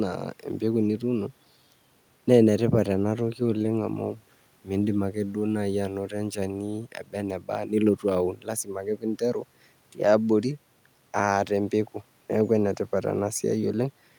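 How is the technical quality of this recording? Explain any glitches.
Nothing stood out as a glitch or technical problem on listening to this speech recording.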